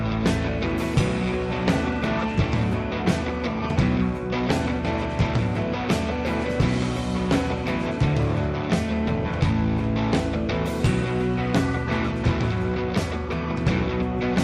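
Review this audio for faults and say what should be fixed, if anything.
Nothing here needs fixing, as the signal holds steady throughout with no audible technical defects at any point.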